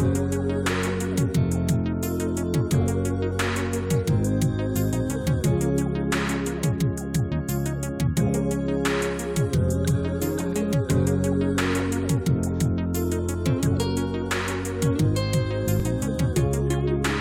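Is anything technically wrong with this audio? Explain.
Yes. At 15.80 s there is a repeated buffer: one block of about 5 ms played twice because fresh data arrived late. The tiny repeat, which fits a 5 ms buffer, is heard as a brief click from the hard joins, with essentially no audio lost.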